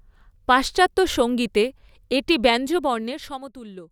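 From 2.65 to 3.58 s a ticking zipper noise rides on the speech as the level falls about 15 dB, stepped in 2 dB jumps roughly ten times a second without smoothing.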